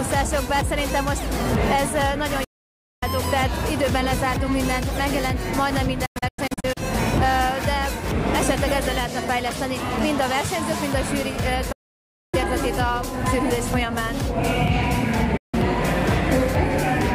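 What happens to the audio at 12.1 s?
A digital broadcast dropout: the receiver lost good frames and muted, fading the sound out within 8 ms to silence from 11.72 to 12.34 s.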